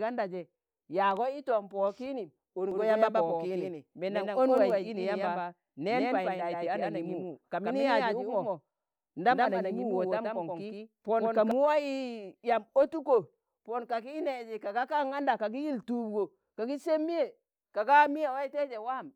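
From 2.71 s to 11.51 s the speech carries a doubled audio track: a second, full-band copy trails the original by about 150 ms, roughly 5 dB quieter. The copy has no reverberant tail or room colouring, so it reads as a hard slapback rather than an echo, and it switches on and off abruptly at both ends. The likely cause is the same signal reaching the mix twice, once through a slower capture path.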